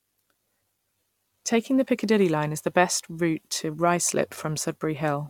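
No technical faults can be heard anywhere in the speech; the signal stays continuous and stable throughout.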